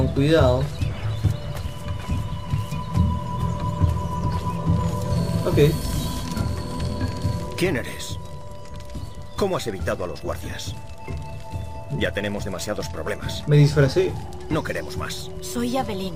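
No technical faults are audible.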